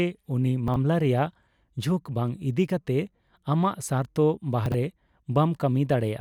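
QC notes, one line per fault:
0.68–0.76 s and 4.66–4.74 s, chunks out of order: each spot has a brief jumbled, scrambled flicker. A 20 ms chunk played three chunks late, after the audio meant to follow it, leaving three hard joins across roughly 80 ms.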